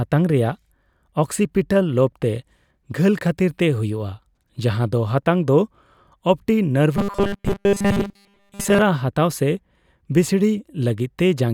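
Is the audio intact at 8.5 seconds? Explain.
No. At 8.5 seconds the speech is inside a stretch of robotic sound from repeated short buffers, running from 6.97 to 8.82 s. New audio was likely arriving too slowly, so playback kept looping a 5 ms fragment while much of the real signal was skipped. Those repeats fill most of the span and stamp a fixed 200 Hz buzz onto the sound, turning it into a rigid, metallic drone that only loosely tracks the speech.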